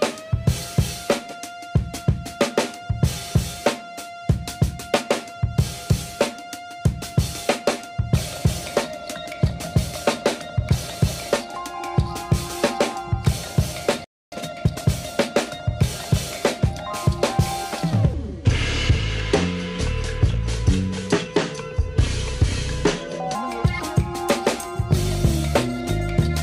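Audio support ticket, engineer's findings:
Playback stall, 14.04 to 14.32 s. Output drops to silence for about 0.28 s in mid-flow. Likely cause: player buffer underrun, or the audio thread blocked and unable to deliver samples. No data reached the output for that span. It is too long to be a single dropped buffer.

Time-compressed catch-up, 14.32 to 14.86 s. Directly after the stall, the audio runs hurried at 1.5x speed with unchanged pitch. Component: player's latency-recovery stage. It drains the backlog by cutting out small pieces and cross-fading the joins. Normal pace returns at 14.86 s.

Section at the wrong speed, 18.14 to 23.35 s. This span plays slow at 0.722x. Speed and pitch drop together, roughly five semitones. The change is abrupt at both edges. Likely cause: an editor or player fitting this section to the wrong clock, a sample-rate mismatch on that segment. Everything in the span sounds deep and dragged. 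Normal speed resumes at 23.35 s.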